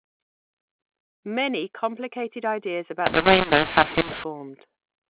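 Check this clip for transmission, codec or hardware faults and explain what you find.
One fault: a mu-law and A-law mix-up from 3.06 to 4.24 s. Speech coded as G.711 mu-law is decoded as A-law, scrambling sample levels, so the speech turns harsh and distorted and pauses fill with noise.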